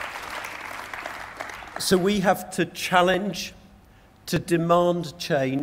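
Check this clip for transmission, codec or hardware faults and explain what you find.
There's one fault here, and it keeps repeating. From 0.69 s to 5.59 s you get a regular click every 1.22 s, about five in all. That's the signature of clock drift buffer slips. The likely cause is two devices running on separate clocks, mismatched by something like 700 ppm. The buffer between them creeps until it drops or repeats a block of roughly 50 samples, and each of those jumps lands as a pop in the sound.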